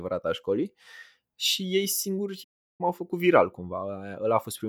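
At 2.43 s the speech cuts to silence in mid-flow and stays silent until 2.81 s, a gap of roughly 350 ms. This is a playback stall, likely caused by the player running short of data or its output thread being blocked.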